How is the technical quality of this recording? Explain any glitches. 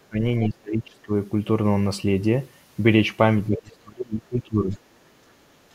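The recording is impaired by echo-cancellation trouble in two forms, both clustered where two talkers overlap.

Speech suppressed in double talk occurs at 0.00–0.22 s, 0.49–1.11 s and 3.49–4.76 s. The talker dips by around 20 to 30 dB, deepest in the last stretch. This is likely an echo canceller ducking everything while both sides talk.

The other side's voice leaking through appears at 0.44–0.48 s, 3.51–3.60 s and 4.72–4.78 s as brief scraps of a second voice, about 10 to 35 dB below the talker. This is likely residual loudspeaker echo the canceller missed. Unlike room reverberation, it is a separate voice rather than a tail of the talker's own.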